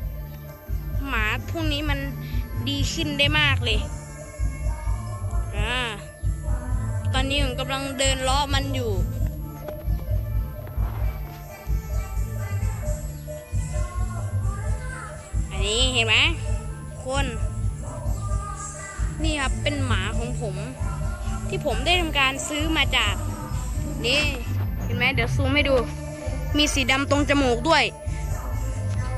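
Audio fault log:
throughout: switching supply whistle, a faint high whistle drifting between about 10.7 and 12.8 kHz, roughly 30 dB down, from a power supply switching in audible burst mode or beating with another supply.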